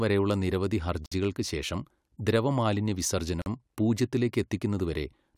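At 1.06 s and again at 3.42 s the speech stops dead for about 57 ms and 44 ms: a gap at a join of encoded pieces, where separately encoded segments kept their encoder delay and end padding. Unlike a dropout, nothing is lost; the speech resumes exactly where it paused.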